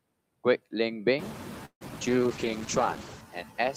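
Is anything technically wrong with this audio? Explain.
Yes, there are four kinds of fault in this speech clip, mostly packed around the middle.

Noise suppressor artifacts run the whole way through. The suppressor pulls down whatever bands it judges to be steady noise, frame by frame, here by about 9 dB. That's why the background drops away in the pauses and swells back under the talking. The room noise comes up around 1 s, by roughly 16 dB, which gives the suppressor more to work against.

Then there's what sounds like a call audio freeze from 1.65 to 1.83 s. The likely cause is packets stalling in transit so the jitter buffer ran dry. The receiver stretched the last sound into a fading buzz for about 154 ms, including roughly 70 ms of near-silence, then picked up where it left off. Nothing is lost, but a gap is inserted and everything after it lands about 154 ms late.

Right after that come two short concealed packet losses, at 1.89–1.91 s (about 40 ms missing) and 2.01–2.03 s (about 21 ms missing). 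These chunks never reached the decoder in time. The gaps weren't filled with synthetic audio this time. The stream jumps forward, clawing back some of that added delay, so you hear tiny smears where a sliver of sound simply vanishes.

Last, a call bitrate drop from 2.08 to 3.29 s. The bandwidth estimate fell and the encoder went from 32 to 10 kbps, sitting at the floor for about 1.1 s. Opus at that rate codes coarsely and trims off the top end. The voice turns muffled and a bit watery and rough until the rate comes back up.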